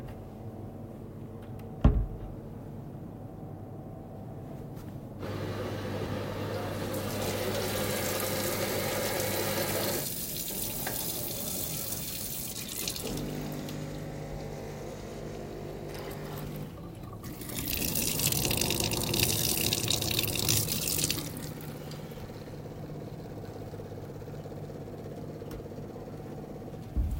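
No technical faults can be heard anywhere in the audio; the signal stays intact and steady throughout.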